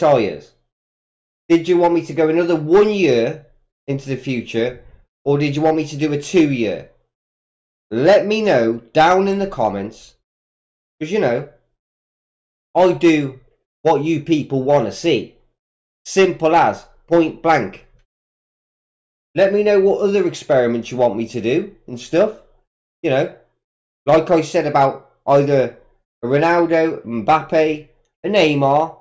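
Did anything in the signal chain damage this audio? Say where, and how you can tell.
No, nothing in the signal chain audibly damages this audio at any point in the recording.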